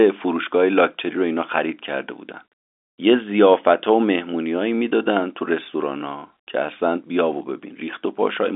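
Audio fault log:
Nothing stood out on listening to this speech, which comes through as an ordinary telephone-band recording, with the usual narrow line band and nothing heard above about 3.7 kHz.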